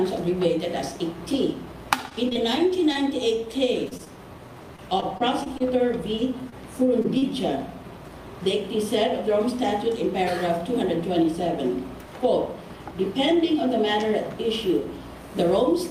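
The audio shows two packet-loss faults. Repeated packet loss (robotic sound) covers 2.09–2.97 s (four gaps, about 80 ms missing, about 8% of the span concealed) and 4.76–5.62 s (five gaps, 100 ms missing, 11% concealed). Each gap is at most 21 ms and gets patched by extending the preceding sound before the next gap arrives, giving a choppy texture. The roughly 20 ms gap size points to 20 ms packets. Short concealed packet loss appears as isolated smears or wobbles at 3.89–3.93 s, 3.97–4.01 s, 4.05–4.08 s, 6.50–6.54 s and 7.02–7.06 s (20 ms lost each), and at 7.18–7.24 s (40 ms lost). In each case the decoder filled the hole by continuing the last sound and then cross-faded back into the received signal.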